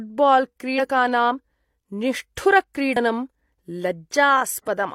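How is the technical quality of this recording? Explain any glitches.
Two brief glitches at 0.75–0.79 s and 2.92–2.97 s: damaged data in a compressed stream. Corrupted frames make the decoder lose sync and misread them, producing short disruptions.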